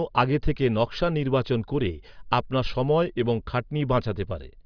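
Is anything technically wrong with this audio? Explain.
No, nothing technically wrong turns up in this speech recording; it sounds fine all the way through.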